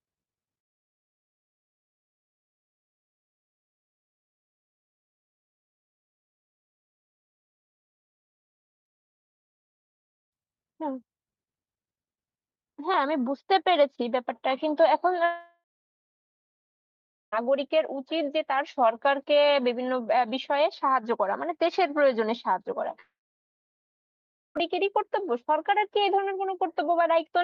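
At 15.25–17.34 s and 23.0–24.57 s the speech dissolves into a brief fading buzz or hiss, then silence, and resumes with material skipped, not delayed, so a long network dropout is likely.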